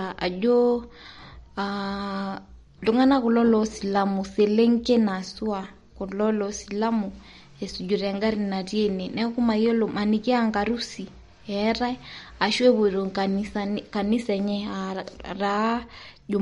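Speech carrying plainly audible MP3 compression damage throughout, likely from encoding at a low bitrate around 48 kbps. A spectrogram shows a hard shelf at 11.1 kHz with nothing above, and flickering holes below where weak bands drop out, heard as watery swirl and smeared s sounds.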